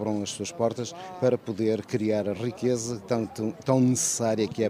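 No technical fault can be heard anywhere in this audio. There is nothing to place in time or trace back to a cause.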